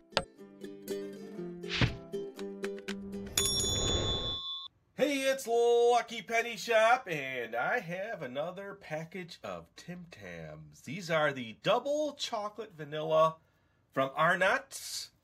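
No faults detected; nothing in the signal path audibly breaks down at any point in the recording.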